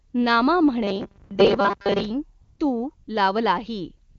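AMR comfort noise first appears from 0.09 to 0.13 s. The phone judged the sound silent and stopped sending speech frames. The receiver filled the gap with smooth, steady synthetic noise. The real background drops out and is replaced.

From 0.84 to 2.10 s the sound becomes a rigid, metallic buzz at 200 Hz. It still roughly follows the original. The likely cause is robotic sound from repeated short buffers. A chunk of about 5 ms is replayed over and over, and most of the real audio is skipped.

Inside that stretch, comfort noise cuts in again from 1.25 to 1.29 s. It returns from 2.41 to 2.59 s, from 2.95 to 3.07 s, and from 4.09 to 4.18 s. Each time, the same steady noise switches in and out.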